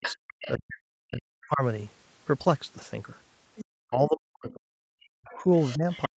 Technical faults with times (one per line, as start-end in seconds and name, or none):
0.00-0.17 speech suppressed in double talk
0.01-0.52 other side's voice leaking through
0.57-1.63 speech suppressed in double talk
3.56-3.65 other side's voice leaking through
3.90-6.17 speech suppressed in double talk
4.51-4.58 other side's voice leaking through
5.27-6.17 other side's voice leaking through